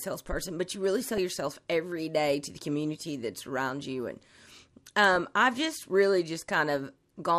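Speech, with plainly audible MP2 compression damage throughout: the sound is dull and carries a gurgling, granular texture, likely from MPEG Layer II coding at a rate around 80 kbps. Too few bits leave upper sub-bands switching off and flickering, and the remaining bands coarsely quantised. DAB burbling appears from 1.01 to 1.18 s, just after "but you really", and from 2.68 to 3.07 s, just after "day to the". In both places, residual bit errors at a low rate passed error correction into the MP2 data, producing short blips of noise in individual sub-bands.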